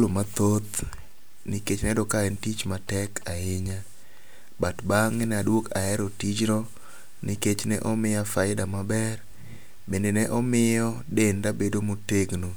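No technical faults can be heard anywhere in the recording.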